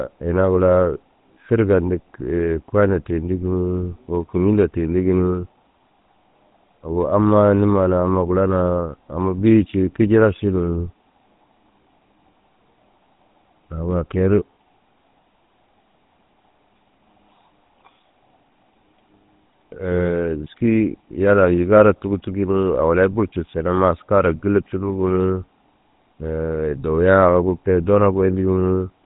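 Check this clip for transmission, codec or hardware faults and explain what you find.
One fault is present: GSM full-rate codec damage throughout the speech. The codec drives a vocal-tract model with sparse regular pulses, giving plainly audible buzzy roughness, nothing above 3.8 kHz, consistent with 13 kbps.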